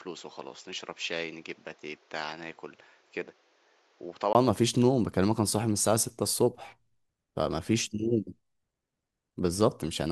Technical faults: input switched to a poorer device

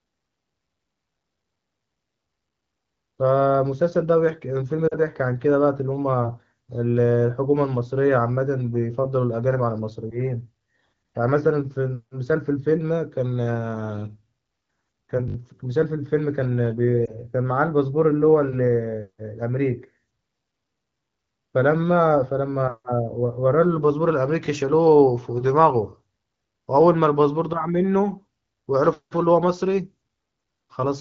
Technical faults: lost AMR speech frames; repeated buffer

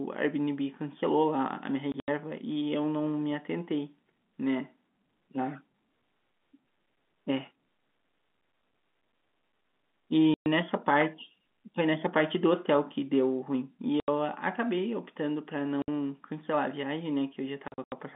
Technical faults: packet loss filled with silence

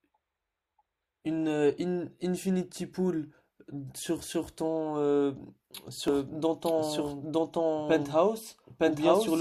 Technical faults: doubled audio track

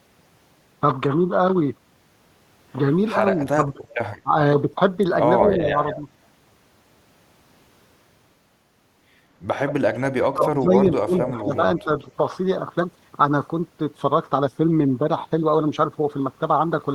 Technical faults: speech suppressed in double talk; echo leak

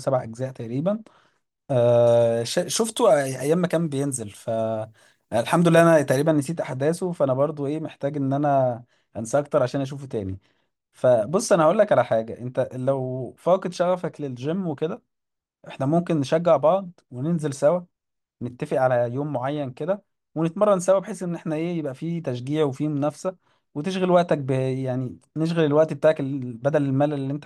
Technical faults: pre-emphasis left on

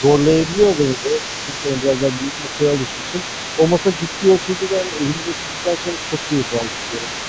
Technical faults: other side's voice leaking through; speech suppressed in double talk

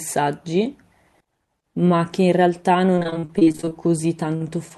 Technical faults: repeated packet loss (robotic sound)

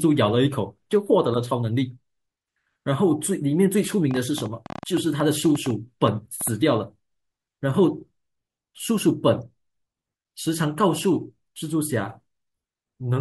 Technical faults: train of clicks

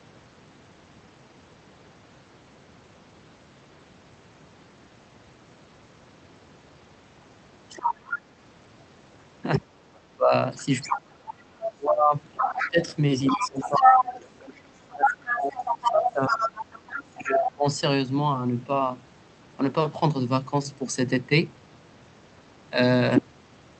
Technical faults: other side's voice leaking through; speech suppressed in double talk

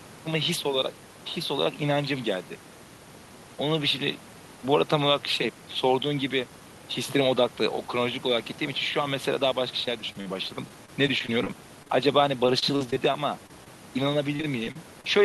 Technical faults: repeated packet loss (robotic sound)

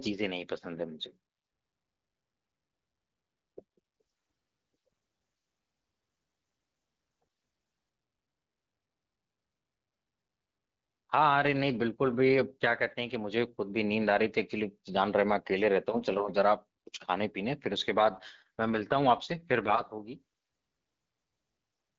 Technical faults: AMR rate drop

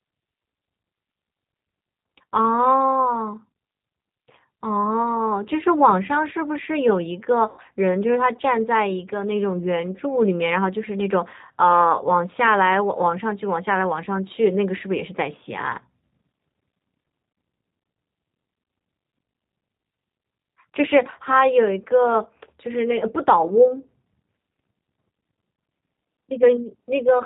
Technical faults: G.729 codec; VoIP packet loss concealed by the speech codec

